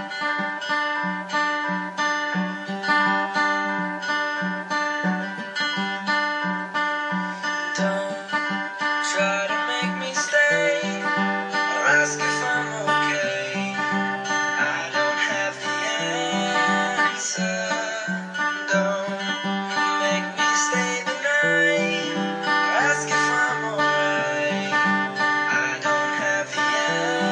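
No technical faults can be heard anywhere in this audio. There is nothing in it that needs a timestamp or an explanation.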